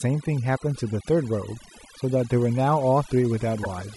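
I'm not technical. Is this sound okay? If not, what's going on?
No. Three separate problems can be heard.

The first is overdone noise removal, present for the whole clip. A cleanup tool meant to strip background hiss was set too aggressively, so it also cut away the quieter parts of the voice. The background sinks to near silence with faint twinkling specks.

The second is a run of clock slip clicks, from 0.19 s to about 3.96 s. They are faint, regular ticks, roughly ten per second, around 40 in all. The likely cause is two pieces of equipment running on separate, unsynchronised clocks, off from each other by something like 200 parts per million. Each time the gap adds up to a single sample, one sample is dropped or doubled, and that tiny jump is heard as a tick.

The third is damaged data in a compressed stream, at 3.61 to 3.67 s. Part of the compressed file was corrupted there, so the player could not read that stretch properly and had to hunt for the next readable block. 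The result is a brief chirp or blip lasting about 50 milliseconds, just before the end of the clip.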